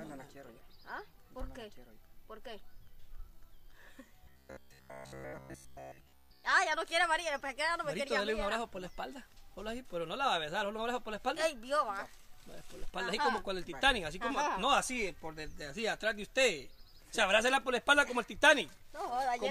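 Robotic sound from repeated short buffers, 4.24 to 6.44 s: the audio becomes a rigid 66.7 Hz buzz, likely a 15 ms chunk replayed over most of the gap.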